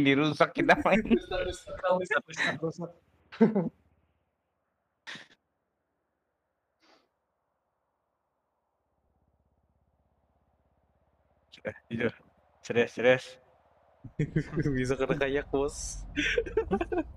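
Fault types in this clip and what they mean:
No technical faults are audible.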